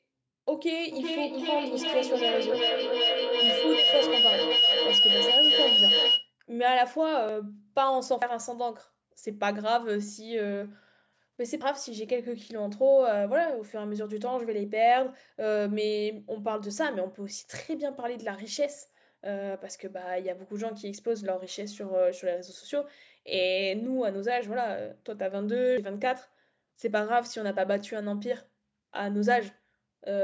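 A speech recording where a feedback howl takes over from 0.92 to 6.33 s. It is a tone near 3 kHz rising to about 5 dB above the voice and pulsing roughly every 0.4 s, visible on a spectrogram as a bright horizontal band. Abrupt skips occur at 7.29, 8.22, 11.61 and 25.77 s, each losing around a tenth to a sixth of a second. The waveform shows discontinuities with no silent gap, likely from a dropped buffer (overrun). The spectrogram is empty above 8 kHz, which matches call microphone processing.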